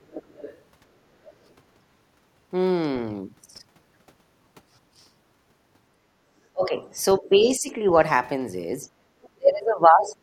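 From 0.11 to 0.6 s a second voice sits faintly under the speech, around 20 dB below it. This is the other side's voice leaking through, most likely far-end audio from the device's loudspeaker that the echo canceller left in the microphone signal. The same residue returns in short scraps at 6.66 to 6.82 s and 10.04 to 10.08 s at a similar level, and very faintly, around 35 dB down, at 9.23 to 9.29 s.

Between 5.94 and 6.24 s the room sound drops out for about a tenth of a second, by about 24 dB at its deepest, then comes back. This is background gated by the echo canceller: with the loudspeaker active, the canceller clamped the microphone path, taking the ambient noise with it until it released. A second, shallower gate at 8.89 to 9.08 s pulls the background down by about 15 dB for around a fifth of a second.

From 6.52 to 7.87 s the talker's own speech sags, losing level in pieces for about a second in total and dropping by around 15 dB at worst. 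This is speech suppressed in double talk, likely caused by both sides talking together so the canceller could not tell the near talker from the echo and attenuated everything. The second instance, 9.36 to 10.22 s, is much heavier, with dips of around 35 dB that nearly cut the speech out for roughly a second.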